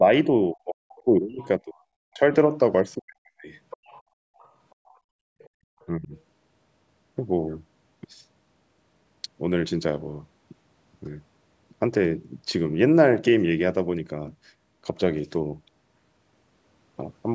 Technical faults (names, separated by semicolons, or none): speech suppressed in double talk; other side's voice leaking through